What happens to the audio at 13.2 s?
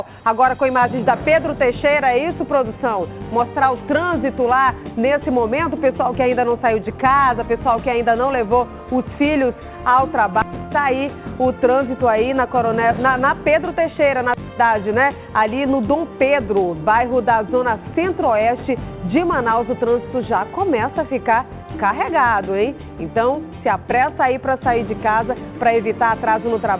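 Nothing goes wrong at 13.2 s: the audio passes through intact, carrying only the narrow call-path bandwidth heard throughout, with nothing above 4 kHz, which fits a G.711 mu-law link.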